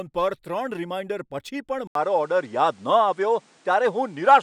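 Input switched to a poorer device at 1.87 s, running to the end. After a brief gap of about 80 ms, the speech comes back duller, with nothing above 10.5 kHz. It also shifts in level by a few decibels and carries a new noise floor sitting around 35 dB below the speech. This abrupt change in bandwidth, tone and background most likely means the recording input jumped mid-take to a different, lower-quality microphone or a headset's call mode.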